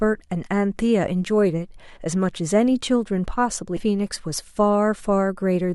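At 3.76 to 3.81 s the speech jumps abruptly forward with a brief blip, and the flow breaks as if a piece of the talk were cut out. This sounds like a stream segment skipped. The likely cause is that one segment of the segmented stream failed to load and the player moved straight on to the next, so that portion of the programme never plays and the audio resumes further along.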